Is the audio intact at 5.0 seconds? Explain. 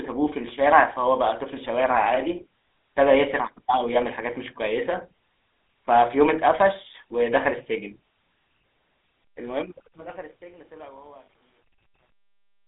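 No. At 5.0 s, as across the whole speech clip, the sound carries GSM full-rate codec damage: a vocal-tract model excited by sparse, regularly spaced pulses, which fits a 13 kbps full-rate coder. The result is a plainly audible buzzy, gravelly roughness. A spectrogram shows the energy confined to a telephone band of about 300 Hz to 3.7 kHz, with nothing above 4 kHz, and a coarse, pulse-striated texture in the voiced regions.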